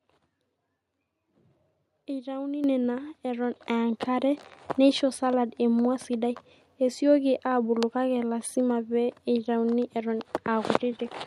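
At 2.64 s the microphone volume is stepped up by about 8 dB, and at 3.66 s by a further 4 dB or so. In both, the device's input gain is raised in one jump. The speech and the background noise get louder at the same instant. A talker raising their voice would not do this, because the noise floor would stay put, and a smooth gain-control ramp would raise the level gradually rather than at once.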